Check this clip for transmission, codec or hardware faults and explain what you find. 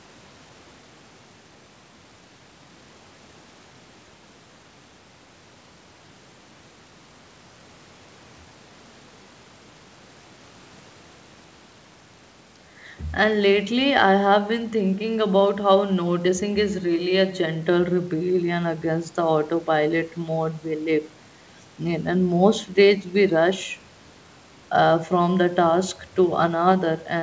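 Nothing stood out on listening; the speech comes across as an ordinary call recording, band-limited to about 8 kHz by the wideband call path.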